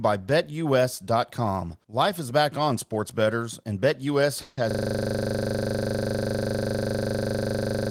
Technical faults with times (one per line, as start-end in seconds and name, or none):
4.41-4.59 call audio freeze
4.71-7.91 system hang loop